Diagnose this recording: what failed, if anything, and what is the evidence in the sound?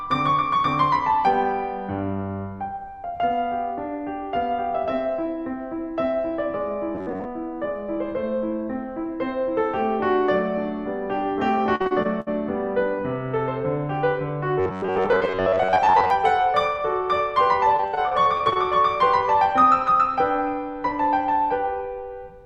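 Robotic sound from repeated short buffers, likely a driver or buffer underrun, at 6.95–7.26 s and 14.60–16.10 s. The music takes on a rigid 94 Hz buzz, which fits about 11 ms chunks being replayed. On a spectrogram this shows as evenly spaced comb-like harmonics.

Repeated packet loss (robotic sound) on the network at 11.75–12.28 s (five gaps) and 17.77–18.73 s (eleven gaps), each up to about 60 ms. The waveform shows repeated looped segments patching the holes.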